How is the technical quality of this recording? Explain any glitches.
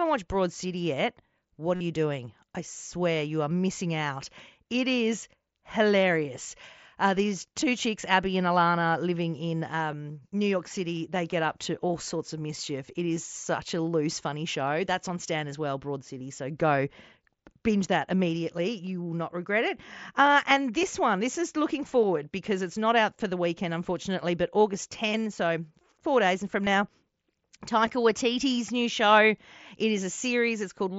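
The recording has brief dropouts from concealed Bluetooth headset packet loss, heard over a wideband mSBC headset link that keeps speech up to about 8 kHz.

Concealed Bluetooth headset packet loss appears at 1.75 to 1.81 s, between "yet what" and "you doing I swear", and briefly at 7.61, 9.92, 16.19, 20.82, 26.65, 27.86 and 30.17 s. Headset packets never reached the phone, so the receiver filled each gap by repeating the closest-matching recent waveform. The single short gaps are nearly hidden. The 53 ms gap near 1.8 s sounds like a short buzzy, steady tone, followed by a slight warble as the real speech resumes.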